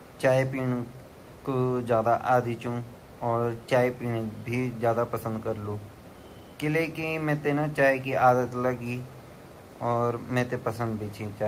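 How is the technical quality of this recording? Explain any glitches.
No technical faults can be heard anywhere in the recording, so there are no glitches to explain.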